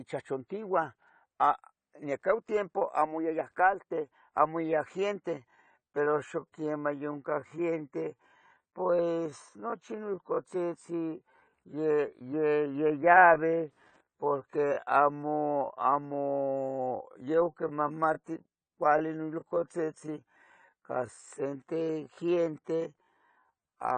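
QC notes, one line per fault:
throughout: AAC compression, likely from a low bitrate around 32 kbps. The spectrogram shows a hard ceiling with holes, and the speech sounds dull, smeared and fizzy on sibilants.
5.32–23.98 s: time-stretched section, likely slowed to 0.7x speed after "amo iyaya", then "quimpias nos". The pace drops while pitch holds, and syllables look elongated on the waveform.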